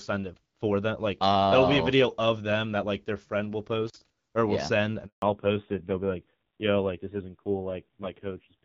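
At 3.87 to 3.97 s the speech breaks up, with crackle at the edges and hiss while about 40 ms is lost, an intermittent contact where a loose cable or plug briefly opened. At 5.06 s the voice dies away into 160 ms of silence until 5.22 s, a handover gap: no speech frames arrived while the call moved between networks, so that stretch is lost. From 5.22 s to the end the voice is duller and rougher, with nothing above 4 kHz. This is a fallback to narrowband, from HD Voice at 12.65 kbit/s to an older codec at a low rate that fits about 5.9 kbit/s. Before the switch, the AMR wideband (HD Voice) codec leaves only light coding damage.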